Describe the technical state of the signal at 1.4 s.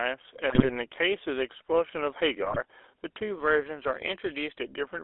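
At 1.4 s the speech has a buzzy, gravelly roughness and a narrow telephone band of roughly 300 Hz to 3.6 kHz, present throughout the clip. This is GSM full-rate codec damage, which fits the 13 kbps coder: it models the vocal tract and drives it with a coarse, regularly spaced pulse excitation.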